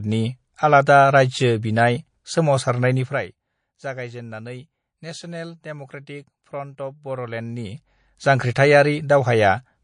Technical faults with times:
0.00-9.83 MP3 compression

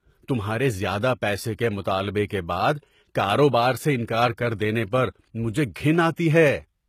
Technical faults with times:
0.00-6.88 HE-AAC compression
2.27-2.30 pre-echo
4.07 pre-echo
6.16 pre-echo

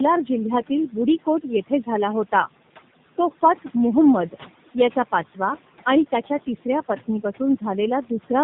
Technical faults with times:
0.00-8.43 tandem speech coding

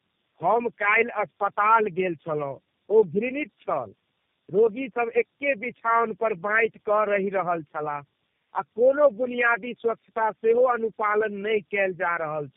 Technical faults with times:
0.00-12.57 tandem speech coding

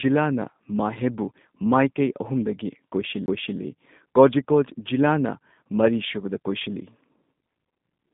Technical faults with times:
0.00-8.13 G.729 codec
3.26-3.28 CD skip

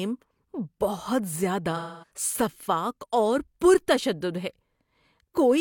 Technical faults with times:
1.76-2.11 AAC frame loss with concealment

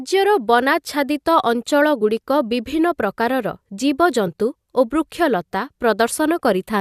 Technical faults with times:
2.00 compressed frames skipped
4.27 compressed frames skipped

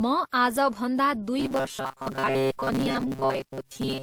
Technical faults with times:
0.00-4.03 transcoding between lossy codecs
1.39-4.03 robotic sound from repeated short buffers

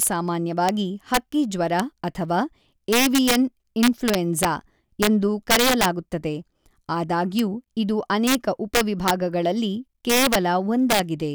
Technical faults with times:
0.00-11.34 integer overflow

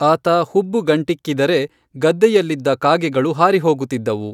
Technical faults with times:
none

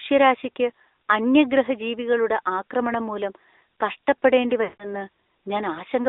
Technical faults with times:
0.00-6.08 AMR narrowband mobile codec
4.64-4.95 lost AMR speech frames

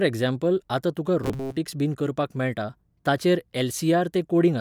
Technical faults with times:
1.24-1.57 robotic sound from repeated short buffers

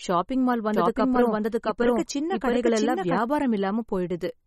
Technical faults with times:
0.00-4.46 MP3 compression
0.74-3.18 doubled audio track

